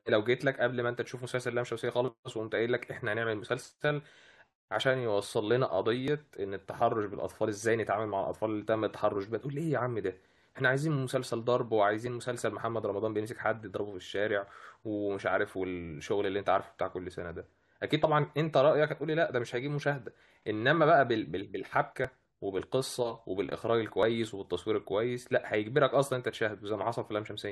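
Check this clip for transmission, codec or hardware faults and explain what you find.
The stream has an overlap between stream segments at three points: 6.08 s, 22.05 s and 24.03 s. Where two consecutive segments claimed the same stretch of time, the player trimmed the shared portion, discarding roughly ten to twenty milliseconds of speech that had never actually been duplicated. The waveform jumps across the gap, producing a brief click or tiny skip each time. All three fall just past 2-second boundaries, which fits a 2-second segment length.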